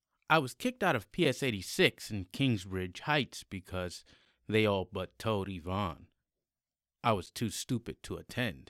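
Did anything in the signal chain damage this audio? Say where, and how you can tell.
Yes. There's a gap between chunks, and it comes from the storage or playback stage, where the speech was handled in 3-second pieces. You can hear three short, hard-edged holes of about 7 ms at 1.25 s, 4.25 s and 7.26 s, exactly 3 s apart. Nothing is missing from the speech itself. Silence is simply inserted at each join, which is why the dropouts are so evenly spaced and so abrupt.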